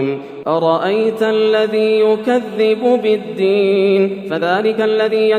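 Around 3.59 s the pace suddenly picks up and stays that way right to the end: the sound runs 1.65 times faster, but the pitch doesn't shift at all. That's a time-stretched section, most likely software squeezing the tail end to fit a shorter length and holding the pitch by dropping short slices of audio as it goes. The result comes across as rushed, with everything crammed together.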